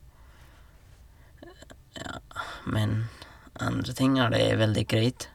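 No technical faults can be heard anywhere in the speech. The sound holds steady from the first moment to the last, with nothing that falters or changes character along the way.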